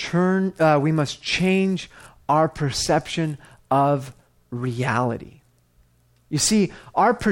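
No technical faults are audible.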